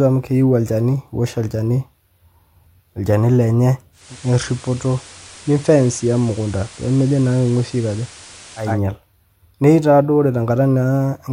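From 3.92 s to 8.81 s, hiss about 20 dB below the speech rises under it and the level dips about 1 dB, each shift easing over 250 ms. This is digital radio blending to analogue: the receiver lost digital and cross-faded to FM, then back.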